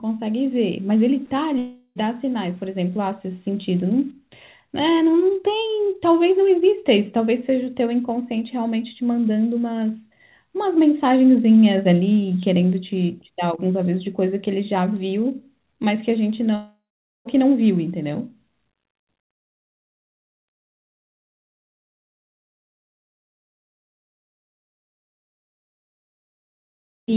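A speech recording, and the first few seconds are rough: from 0.39 to 4.11 s the sound has a gritty, grainy texture that rides along with the level, with the error sitting only about 40 dB under the signal. That's low bit depth without dither, most likely the audio rounded down to around 8 bits with nothing to decorrelate the error, so the distortion tracks the sound instead of sitting as a steady hiss. Inside that same stretch, at 1.58 s, there's a long network dropout. Roughly 0.38 s of audio never arrives, the receiver smears the last sound into a fading buzz, there's a brief gap of about 50 ms, and things pick up at 1.97 s minus what was lost. A second, longer one hits at 16.55 s, where about 0.7 s is missing. You get the same decaying fill, then close to half a second of dead air before the audio returns at 17.27 s. Both fit packets lost in transit on a call path, and that path's codec leaves the whole clip band-limited with nothing above 4 kHz.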